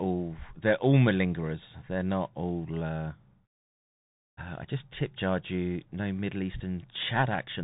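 Throughout the speech, the Bluetooth CVSD headset codec is plainly audible. Nothing passes above 3.8 kHz. The one-bit up-or-down coding, which fits a 64 kbps CVSD link, cannot track fast loud highs, so s sounds turn scratchy and a granular hiss sits underneath.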